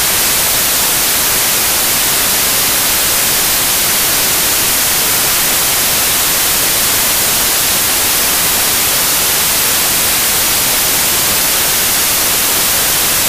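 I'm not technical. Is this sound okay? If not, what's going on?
No. From start to finish it plays as loud, harsh hiss. These are samples built from the wrong bytes: each value's pieces are put together wrongly. Unlike ordinary background hiss, it is loud and harsh the whole way through.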